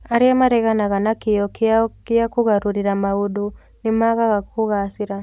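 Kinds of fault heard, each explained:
No technical faults can be heard anywhere in the recording, and the speech signal stays steady and intact throughout.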